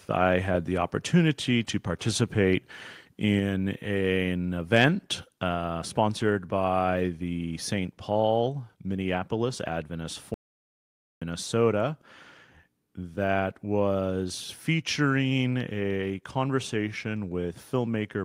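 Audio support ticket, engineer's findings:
Audio dropout to silence, 10.34–11.22 s: input likely lost at capture device or link, recorder kept writing silence. Speech cuts out for 0.87 s, dead silence, no room tone.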